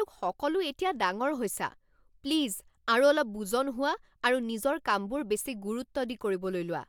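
No technical faults are audible.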